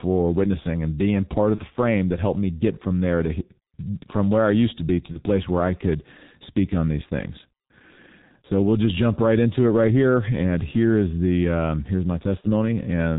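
Throughout the recording the speech carries heavy G.723.1 codec damage, consistent with its 6.3 kbit/s mode. Nothing survives above 4 kHz, so the voice is muffled and hoarse and consonants smear together. The model of the voice updates only once every 30 ms, which blurs quick changes. On a spectrogram, energy stops at a hard ceiling near 4 kHz, and harmonics look coarse and blocky along the time axis.

VoIP packet loss concealed by the speech codec occurs three times. The first runs from 1.55 to 1.61 s, between "witnessing and being part" and "the frame that helped". The second runs from 5.12 to 5.19 s, between "used to be to" and "place where I could". The third runs from 12.41 to 12.45 s, just after "the um here's my". Each gap points to a single lost 30 ms frame. The decoder fills it by repeating its last pitch and filter at falling gain, so the speech is briefly stretched into a fading sound. 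On a spectrogram, flat copied harmonics dim across the gap. The waveform envelope sags and takes a moment to recover.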